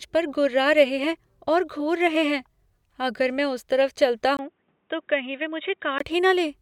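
At 4.37 s, after a 20 ms gap, the speech turns dull and boxy, with nothing above 3.8 kHz, a few decibels quieter, and over a faint new background noise until 6.00 s. That gap and the fresh noise mark the likely cause as an input switched to a poorer device, not a simple filter.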